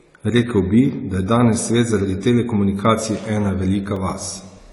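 From the start, the speech sounds dull and smeared. Nothing is heard above 11.4 kHz. Sibilants have a fizzy, warbling texture. This is likely AAC compression at a low rate, one that fits roughly 32 kbps. It cuts the top band and coarsely quantises the rest.

At 3.96 s there is a brief tick or dip. A block of digital silence replaces the sound for 1.45 ms, which fits a 64-sample block. The signal drops out and returns with no fade.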